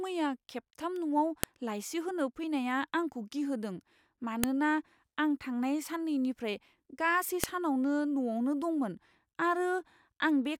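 At 1.44 s, right before "लाइसि होनो फैनाया आंखौ", there's a sharp snap, then again at 4.44 s and at 7.44 s just after "साननैनिफ्राय गासै". That's a file header played as audio: WAV pieces joined every 3 s with their headers left in, so those bytes click through as samples.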